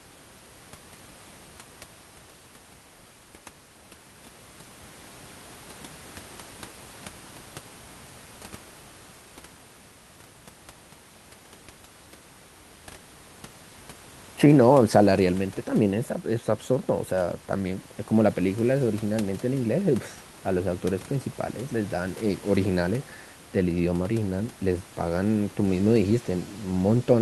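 No faults detected; the speech comes over an Opus call path that sounds band-limited around 12 kHz, with room noise sitting about 25 dB below it.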